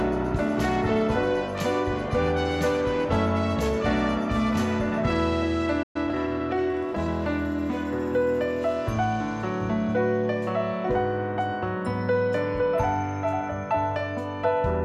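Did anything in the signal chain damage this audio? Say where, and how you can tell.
Yes, at the playback stage. A playback stall cuts the sound off abruptly at 5.82 s, leaving about 120 ms of silence before it resumes at 5.96 s. The audio continues rather than restarting, so this is not a dropout in the recording itself. The likely cause is the player's output buffer running dry, or its thread being blocked, until data arrived again.

Immediately after the gap, from 5.96 s to 7.14 s, the sound runs at about 1.1 times normal speed while its pitch stays where it was. This is time-compressed catch-up. The player drains the backlog built up during the stall by removing short segments and cross-fading across the joins. After 7.14 s the rate returns to normal.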